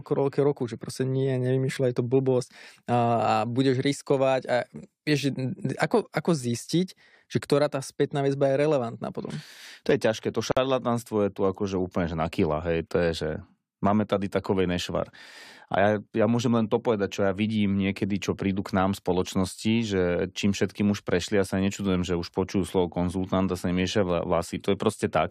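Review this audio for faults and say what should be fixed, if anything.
A gap at a join of encoded pieces opens from 10.52 to 10.57 s, right after "je ťažké to": about 52 ms of silence with smeared edges, after which the speech resumes exactly where it stopped. Unlike a dropout, nothing is lost. Silence is inserted because the pieces were encoded separately and the encoder's start delay and last-frame padding were left in. To prevent it, encode the audio as one continuous piece or trim each piece's encoder delay and padding before joining.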